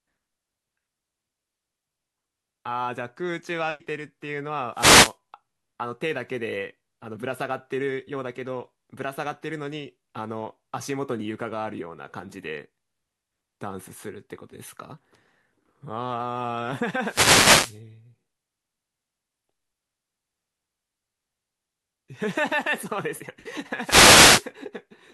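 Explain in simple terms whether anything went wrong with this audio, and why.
Three wireless microphone noise hits: bursts of static at 4.73–5.16, 17.01–17.81 and 23.77–24.51 s, where the radio signal briefly faded and receiver noise rose.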